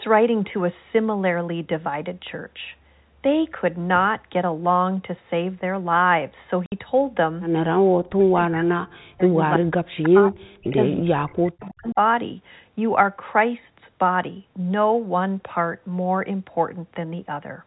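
At 6.66 to 6.72 s, 60 ms of packets went missing, which fits two lost packets, and the receiver filled the gap with silence. The sound stops dead for that moment, with abrupt edges that can click on either side.

From 8.03 s the echo canceller was likely confused by double talk and turned the near-end speech down along with the echo. This speech suppression in double talk hits 8.03 to 9.38 s, 9.57 to 10.44 s, 10.6 to 10.78 s and 11.01 to 11.99 s. The speech dips or drops out in pieces, by as much as roughly 40 dB at its deepest.

In the same stretch, loudspeaker pickup likely slipped past cancellation as an echo leak, returning a copy of the speech delayed by 326 ms. Brief scraps of it appear at 9.54 to 9.58 s, 10.9 to 11.01 s, 11.61 to 11.68 s and 11.88 to 11.94 s. The first is only about 10 dB under the speech, and the later ones fade to about 35 dB down.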